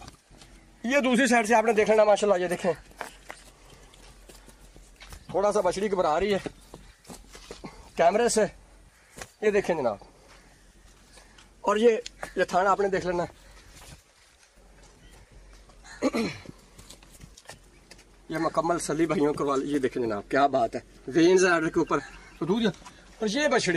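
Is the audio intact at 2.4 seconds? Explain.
Yes, the audio is intact at 2.4 seconds, with no dropout, click, distortion or other fault audible at that point.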